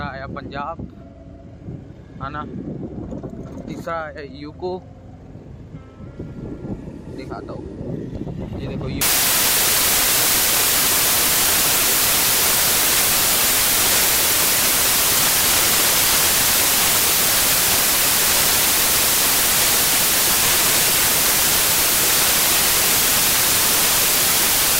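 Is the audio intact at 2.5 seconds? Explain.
Yes, at 2.5 seconds the audio is intact, with no fault to be heard at that moment.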